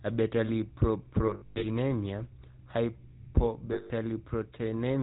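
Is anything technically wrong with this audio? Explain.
Yes. The speech goes through a GSM full-rate codec throughout. Nothing passes above 4 kHz, and pulse-driven excitation leaves a plainly buzzy, gravelly roughness, consistent with a 13 kbps coder.

Lost GSM frames occur at 1.26 to 1.66 s and 3.72 to 3.91 s. Missing frames reuse the last good settings at falling level. The sound holds as a rough, metallic ring.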